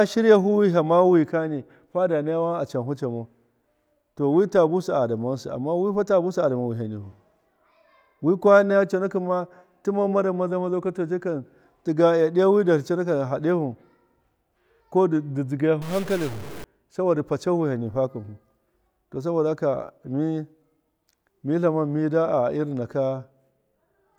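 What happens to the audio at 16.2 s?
A stuck bit runs from 15.82 to 16.64 s, likely one data bit frozen, offsetting samples by around -30 dBFS and causing harsh, buzzy distortion.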